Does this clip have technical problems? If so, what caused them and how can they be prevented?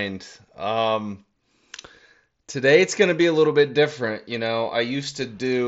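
No, there's nothing wrong here; the speech simply comes over a Bluetooth headset link using the mSBC codec, which carries it as wideband audio up to about 8 kHz, so there's nothing that needs preventing.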